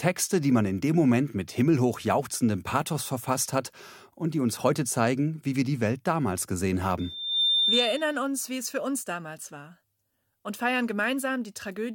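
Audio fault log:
6.99–8.20 s, loudspeaker feedback squeal: a 3.6 kHz tone swells within half a second above the speech; the microphone hears its own loudspeaker, and loop gain exceeds one there.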